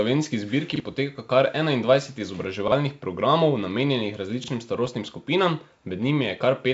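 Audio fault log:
0.76–0.80 s, 2.68–2.72 s, 4.44–4.48 s: repeated buffer. A 40 ms stretch plays twice with a hard join, heard as a brief stutter before "poteka kar", before "programov namenjenih", and after "programov namenjenih". This fits a 40 ms buffer replayed when fresh audio arrived late. An exact copy rather than silence sets it apart from a dropout.
4.75–4.90 s: bit errors on an ADPCM link. Pops and rough bursts with jumpy level changes come through the G.722 path. Each flipped bit throws off the decoder's step size and predictor, so the disturbance rings on for milliseconds instead of staying a single click, which distinguishes it from a buffer glitch.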